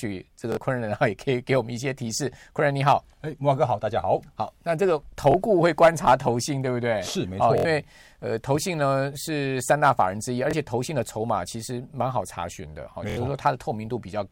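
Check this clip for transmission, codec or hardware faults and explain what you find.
Bluetooth stutter occurs five times in the speech: 0.52–0.57 s, 5.32–5.34 s, 7.58–7.65 s, 10.51–10.53 s and 13.10–13.17 s. When data arrived late or went missing, the receiver replayed its last slice, about 23 ms, until fresh audio came. Gaps of 23, 46 and 70 ms fit one, two and three lost packets, giving a brief buzz before the speech jumps ahead. A spectrogram shows short blocks of identical repeated columns. The waveform shows copied cycles.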